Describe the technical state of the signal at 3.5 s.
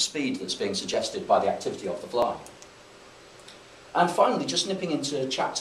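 At 3.5 s the signal is in the middle of a run of clock drift buffer slips that lasts from 0.94 s to 4.78 s. A short click recurs every 1.28 s, and one falls right at 3.50 s. The steady spacing likely comes from two devices on independent clocks that differ by roughly a thousandth. The buffer between them drifts until a few dozen samples are dropped or repeated, which leaves a small discontinuity in the waveform.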